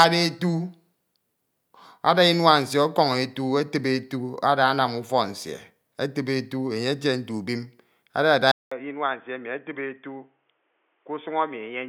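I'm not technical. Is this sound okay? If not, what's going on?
No. At 8.52 s, right after "nte ubrion adada", the speech drops out for 0.2 s, then returns duller and quieter, likely an input switched to a poorer device, losing everything above 3.5 kHz.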